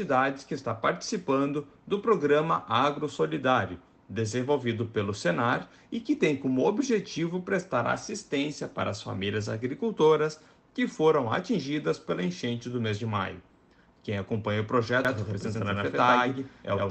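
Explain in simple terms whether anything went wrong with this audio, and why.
From 15.05 s to the end, there's a doubled audio track: an equally loud copy trails about a tenth of a second behind, likely from a second, slower recording path. It starts abruptly and doesn't fade or sound roomy the way an echo would.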